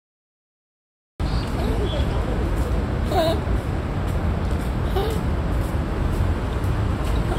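Sounds with a cut-off start. The first 1.2 s are digital silence. At 1.20 s the audio jumps straight into the middle of a sound, with no natural attack or fade-in. The recording or stream began late and missed the sound's true beginning.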